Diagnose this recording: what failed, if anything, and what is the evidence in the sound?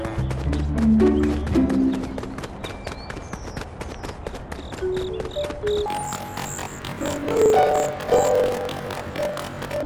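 From 5.86 s to the end at 9.85 s, the sound jumps an octave high and takes on a rapid flutter at about 23 Hz, yet its overall pace is unchanged. This is a sample-format conversion fault: planar audio read as interleaved. Each 42.67 ms block, which fits a 2048-sample block, stores all left samples and then all right. Read as alternating pairs, each half plays at double speed, left and then right, which gives the octave rise and the flutter at the block rate.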